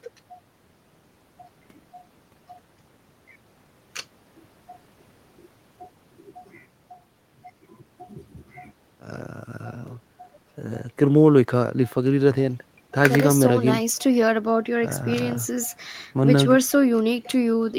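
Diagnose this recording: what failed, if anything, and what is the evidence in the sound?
No failure is audible anywhere in this speech recording.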